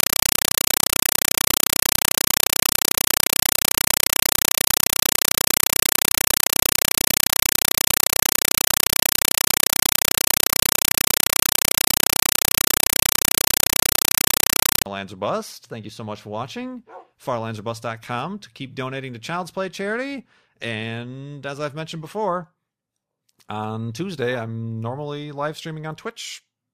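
From 0.0 to 14.86 s, a compressed stream played as audio replaces the speech. The data went undecoded, which fits a 256 kbps AC-3 stream. It sounds like loud chattering static: 5.33 ms noise bursts, 31.25 per second. These show as full-band vertical stripes separated by flat silent gaps.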